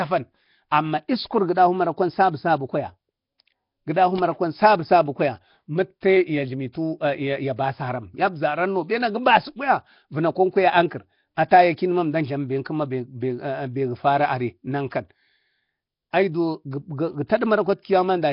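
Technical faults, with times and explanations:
Throughout: Nellymoser compression. The speech has a rough, hissy halo and a smeared, underwater quality, with nothing above 5.3 kHz. The cause is likely the Nellymoser Asao codec, which gives weak bands no bits and fills them with noise. The heavy damage fits about 22 kbps.
6.01 s and 6.72–6.75 s: pre-echo. A brief hiss of about 20 ms creeps in just before each sharp onset and blunts the attack. The codec spreads its noise across a whole block, so noise sized for the loud onset fills the quiet instant before it.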